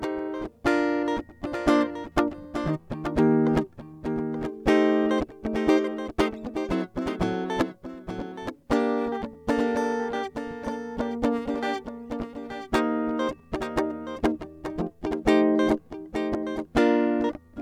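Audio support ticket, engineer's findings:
Doubled audio track throughout the music: a clean, dry second copy trails about a second behind, roughly 10 dB down. Likely a slower capture path mixing in twice.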